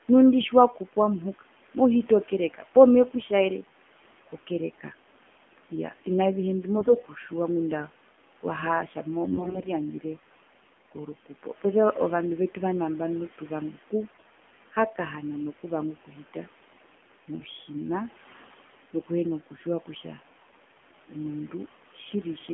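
Speech with a boxy, band-limited, buzzy and somewhat synthetic tone throughout, confined to roughly 200 Hz to 3.4 kHz, with a faint room background about 24 dB below the voice. This is the AMR narrowband mobile codec at a low rate, which fits 7.4 kbps. It rebuilds the voice from a coarse vocal-tract model and a few excitation pulses, so nothing above 4 kHz survives. The voice turns hoarse, scratchy and gargly from 6.76 to 7.11 s, 9.28 to 9.70 s (the harshest), 14.04 to 14.23 s and 17.40 to 17.49 s, while pitch and level hold. These are AMR bit errors. Corrupted, weakly protected frame bits misplace the excitation pulses and skew the finer gain and spectral values.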